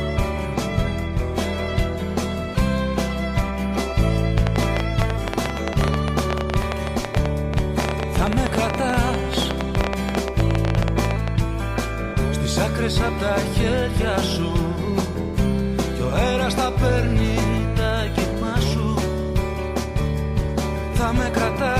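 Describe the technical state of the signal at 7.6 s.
At 7.6 s the signal sits inside a train of clicks running from 4.38 to 11.29 s. Around seventy sharp, similar pulses arrive unevenly, about 11.5 per second, peaking well above the sound. The likely cause is electrical interference or a faulty connection or power supply.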